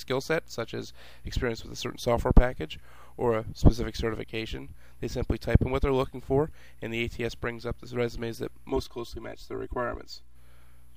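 From 8.70 to 10.36 s, one channel runs roughly 3 ms behind the other before the two are summed to mono, a channel delay causing comb filtering. Shared content cancels in notches evenly spaced from around 150 Hz upward, leaving it hollow and phasey.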